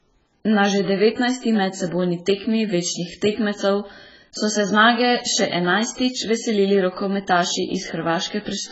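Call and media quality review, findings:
Speech dull, smeared throughout; nothing above 7.7 kHz; fizzy sibilants. Likely AAC compression; fits AAC-LC near 12 kbps, too few bits, highs dropped.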